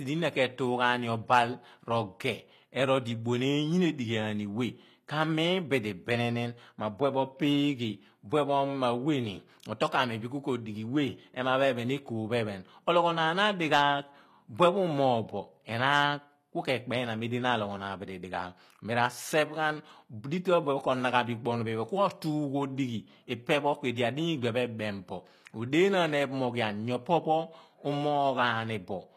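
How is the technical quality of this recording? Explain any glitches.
The recording has plainly audible codec damage throughout. The treble sounds synthetic, s sounds come out gritty and lispy, and nothing is present above about 14.9 kHz. This is likely HE-AAC compression at a low bitrate, around 24 kbps, which rebuilds the upper speech band by copying lower bands upward, so the harmonics there don't match.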